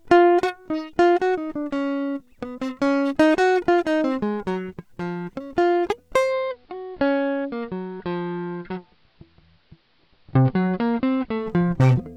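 A music clip in which a hybrid radio shows digital radio blending to analogue: at 6.18 s the receiver loses its digital stream and cross-fades over 172 ms to the station's AM broadcast, returning to digital at 11.54 s. During that stretch the treble is cut back, the level drops by about 2 dB, and a faint hiss sits roughly 40 dB below the music. A spectrogram shows a lower ceiling with a raised noise floor between those times, and the waveform steps slightly lower.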